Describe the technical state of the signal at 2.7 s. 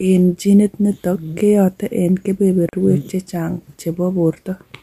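At 2.69 to 2.73 s, right after "genit nitok keyote en", there is a gap at a join of encoded pieces. Separately encoded segments were spliced untrimmed, leaving a 41 ms gap with smeared edges. The speech then resumes where it stopped.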